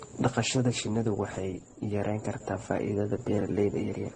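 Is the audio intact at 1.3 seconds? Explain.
No, 1.3 seconds sits inside a problem that runs through the whole speech clip. It sounds like transcoding between lossy codecs, likely a low-rate Opus pass of around 16 kbit/s re-encoded to AAC-LC at around 32 kbit/s. The second encoder wastes bits preserving the first one's artefacts and then adds its own, so you hear both sets of artefacts stacked together. There's also nothing above 9.7 kHz, which gives it that dulled top end.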